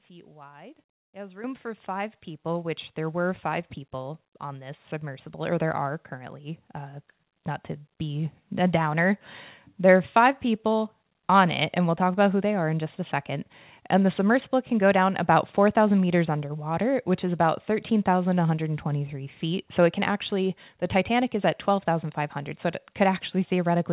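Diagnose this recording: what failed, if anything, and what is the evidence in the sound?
The microphone volume stepped up at the call-processing stage, at 1.44 s (about 9 dB, just before "for five"), 2.46 s (about 4 dB), 5.52 s (about 4 dB, between "people on this submersible" and "there are") and 6.54 s (about 1 dB, after "there are"). Gain control raised the device input level in abrupt steps. Unlike a talker simply getting louder, the background noise jumps together with the voice.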